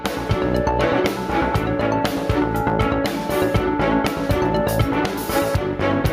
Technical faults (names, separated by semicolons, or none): gain pumping